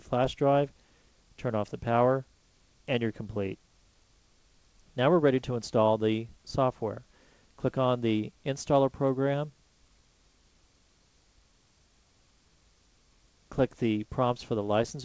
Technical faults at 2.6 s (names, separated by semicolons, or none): none